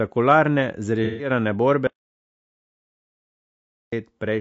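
Throughout the speech there is a rough, grainy quality with a hiss filling the gaps between pitch harmonics and a thin, synthetic top band. This is low-delay AAC compression, likely the AAC-ELD codec used for video calls, and the damage fits a bitrate of around 32 kbps. Its short frames cannot separate closely spaced harmonics cleanly, and at this low bitrate bits are spread thin. On a spectrogram the harmonic lines look smeared, with noise between them and a blurred, uneven upper band.

From 1.04 to 1.30 s comes AAC frame loss with concealment. The decoder lost a short run of frames, about 150 ms of audio, and filled the gap by reusing the last good spectrum with altered detail. The result is a brief smeared, phasey and noisy patch where the speech should continue. On a spectrogram that stretch shows held or blotchy energy with no real harmonic motion.

From 1.87 to 3.92 s there is an audio dropout to silence. 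The sound cuts off mid-flow and is replaced by about 2.05 s of silence, with no room tone at all, before the speech returns just as abruptly. The likely cause is that the input was lost, with the recording carrying on over the gap. The waveform is a flat line, and the spectrogram shows a solid black block.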